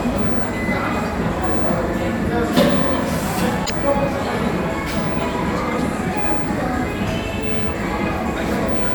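A brief glitch breaks in at 3.62 to 3.70 s, from damaged data in a compressed stream: the decoder misread corrupted frames and lost sync until the next one.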